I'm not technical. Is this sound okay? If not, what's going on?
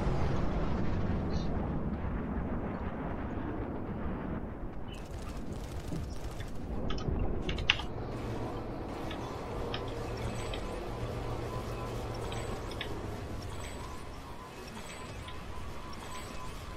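Yes, nothing in this recording points to a technical problem with how the sound was captured or carried.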